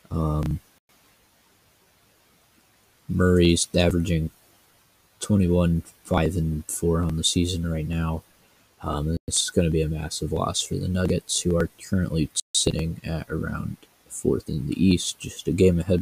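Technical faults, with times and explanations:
0.77 to 15.99 s, clock drift buffer slips: two devices in the chain likely run on separate clocks that disagree by a few hundred parts per million, so the buffer between them creeps toward empty or full until a small block of samples, around fifteen, is dropped or repeated to catch up. Each slip breaks the waveform abruptly, giving a short click roughly every 0.9 s, about twenty in all, evenly spaced while the sound plays.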